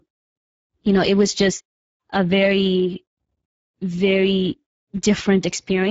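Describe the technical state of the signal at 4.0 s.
At 4.0 s the speech is carried through the Speex codec, and that coding runs for the whole clip. Speex is a CELP coder. At a rate that fits roughly 10 kbps it has few bits left for the excitation signal. The damage is plainly audible here. The speech sounds noisy and hoarse. Nothing is present above about 7.7 kHz. The upper band sounds like shaped noise, not real detail.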